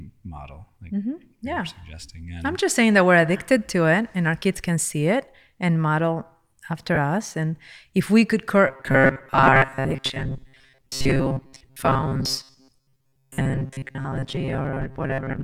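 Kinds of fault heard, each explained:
Lost LE Audio frames: Just after "it and model after", around 6.95 to 6.98 s, the speech briefly turns into a noisy, smeared patch. About 20 ms of audio went missing, consistent with two dropped LC3 frames, and the decoder filled the gap with randomised copies of the last spectrum.
Robotic sound from repeated short buffers: From "if we could" at 8.67 s to the end, the speech becomes a rigid metallic buzz pitched at 134 Hz that loosely tracks the words. This is likely a tiny buffer of about 7.5 ms being repeated, so most of the real audio is skipped.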